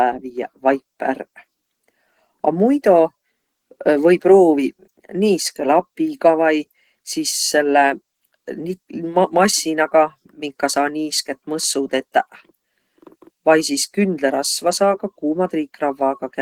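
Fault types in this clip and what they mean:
Opus voice compression: The whole speech clip passes through a low-rate Opus voice coder. The damage is plainly audible. Below 8 kHz, a linear-prediction coder models the voice and codes its excitation coarsely. That makes the speech sound hoarse and slightly robotic. A thin transform layer carries the band above 8 kHz. It keeps some top end. The texture fits a rate near 16 kbps in 20 ms frames.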